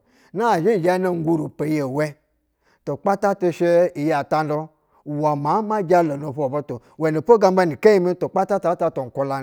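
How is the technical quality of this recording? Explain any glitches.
The technical quality of this recording is sound, and there are no glitches to explain.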